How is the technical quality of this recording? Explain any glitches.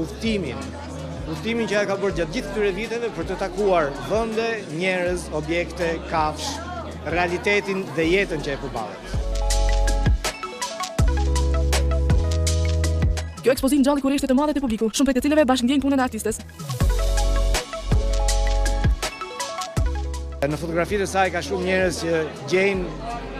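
One glitch affects the technical quality: a time-stretched section from 13.11 to 16.79 s. Across that span the audio suddenly runs about 1.84 times faster while its pitch holds steady, so the passage sounds rushed and then drops back to normal pace at 16.79 s. The likely cause is software squeezing that stretch to fit a shorter length, keeping the original pitch by cutting out short pieces rather than raising it.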